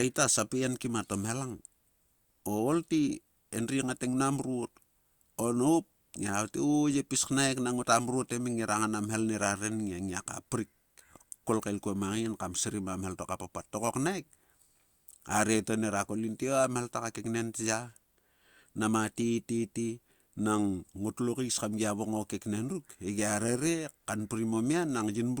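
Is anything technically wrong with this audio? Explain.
No, nothing technically wrong stood out on listening to this speech recording.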